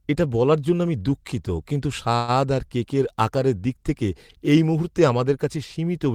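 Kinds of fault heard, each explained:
Call audio freeze: from 2.15 to 2.34 s, between "জন্য আমি দুঃখিত কিন্তু" and "আর কেকের আকারের দিক", the last sound is held as a fading buzz or hiss for about 126 ms. This is likely an emptied jitter buffer waiting on late packets. The speech then resumes intact, 126 ms later.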